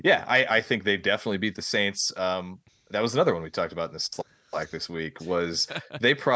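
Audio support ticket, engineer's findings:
Nothing to flag on this speech clip; the top end stops at 8 kHz and the lowest bass is trimmed, which is just the call's microphone processing doing its normal job.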